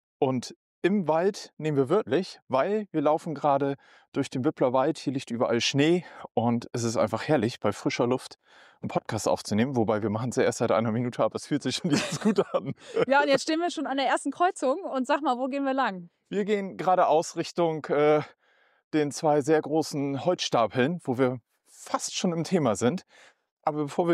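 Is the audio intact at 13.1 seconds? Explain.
No. From 11.89 to 13.89 s the sound plays about 5.6% slow, a full semitone flat, then snaps back. This is a drift correction step, likely from clock-matching software adjusting the playback rate in one jump. Unlike wow or flutter, the detuning holds steady rather than wobbling.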